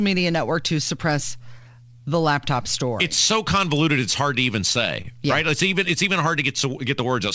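Speech over a call path, with one short concealed packet loss at about 5.02 to 5.06 s, right after "it's hard to even". Roughly 20 ms of audio didn't arrive in time, so the receiver carried the last sound forward, pitch-based if it was voiced or as shaped noise if not, then faded back into the real signal. What you hear is a quick smear or wobble there, and a brief sound could drop out. The call path itself tops out around 8 kHz, which fits a G.722-style codec.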